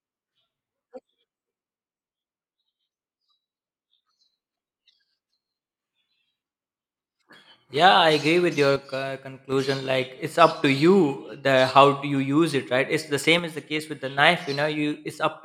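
One channel drops out at 1.76 to 4.07 s, 8.76 to 9.52 s (right after "agree with your") and 13.39 to 14.18 s: the speech abruptly falls about 6 dB, likely from one stereo channel vanishing before the mono sum.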